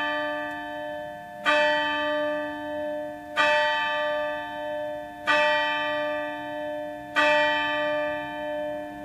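There are no technical faults to describe in this recording of everyday sounds.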